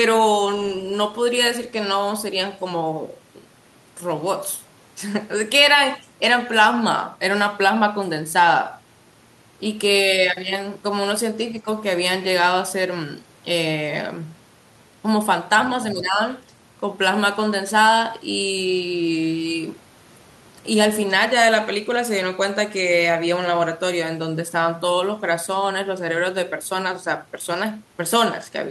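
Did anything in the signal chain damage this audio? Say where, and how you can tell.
Yes. The speech briefly sinks by roughly 10 dB at 11.62–11.67 s and again over 15.94–16.21 s. That's likely speech suppressed in double talk at the call-processing stage: the echo canceller heard both ends at once and ducked everything to kill possible echo.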